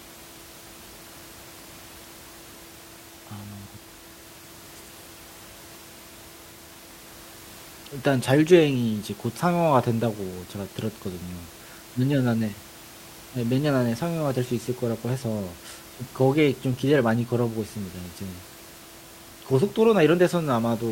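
No technical faults occur in this speech at any point, and the room noise sitting about 22 dB below the voice belongs to the recording itself.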